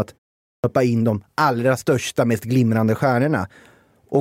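At 0.53 s, "in de allra största" bursts abruptly out of silence, its first 108 ms missing: a clipped start after a pause, as the output device woke late after 0.43 s of quiet.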